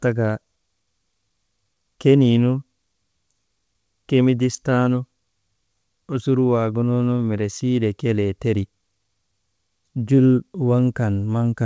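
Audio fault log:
Throughout: clock drift between sender and receiver. The sender's clock runs about one and a half percent slow. The jitter buffer keeps draining, so the receiver must stretch the sound to keep playing. Small, uneven timing hiccups result, heard over a G.722 path that carries nothing above 8 kHz.
0.32 to 11.39 s: repeated timing corrections. The receiver keeps inserting short repeated pieces to cover the slow sender. Playback runs at 99 percent speed, adding roughly 150 ms overall. The edits are small and unevenly spaced.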